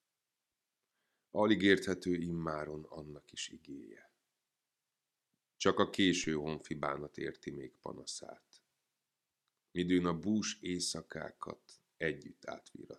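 A single low thump lands at 6.24 s while the sound itself carries on unchanged, the signature of a DC step: the waveform's zero line jumps by about -43 dBFS, then drains away as a 5 Hz high-pass pulls the offset back to zero.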